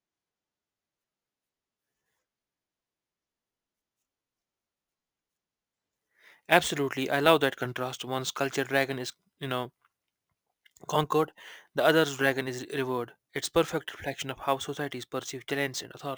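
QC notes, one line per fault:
Throughout, crude rate conversion: the speech carries a gritty, inharmonic fizz, roughly 20 dB below it, that rides on louder and brighter syllables. Samples were repeated rather than filtered, which fits a 32 kHz source converted to 44.1 kHz, producing patterned error tones.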